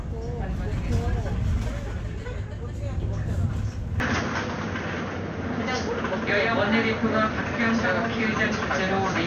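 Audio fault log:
4.0–9.26 s, input switched to a poorer device: the sound abruptly turns duller, with nothing above 6.5 kHz, a level change of around 5 dB and a faint new noise floor. Likely a change of microphone.
5.97 s and 8.25 s, damaged data in a compressed stream: brief blips where corrupted frames were misdecoded and the decoder resynchronised at the next intact frame.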